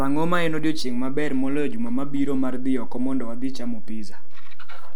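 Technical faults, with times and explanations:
Throughout: DC offset, the speech sits on a constant shift of about -17 dBFS, inaudible itself but eating headroom and leaving steady energy at 0 Hz.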